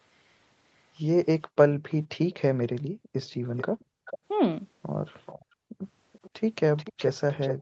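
The echo canceller clamps the microphone hard while the far-end loudspeaker plays, so the background gated by the echo canceller dips by up to about 40 dB from 1.69 to 1.83 s, 2.84 to 4.05 s and 5.45 to 5.82 s, the room tone vanishing and snapping back. Residual loudspeaker pickup slipping past the canceller is the likely cause of an echo leak: a delayed copy of the speech, about 470 ms behind at 1.89 to 1.93 s and barely audible, then 433 ms behind at 3.57 to 4.18 s, 5.26 to 5.45 s, 6.13 to 6.30 s and from 6.76 s to the end, loudest in that final stretch, all within the 8 kHz band of the Opus call path.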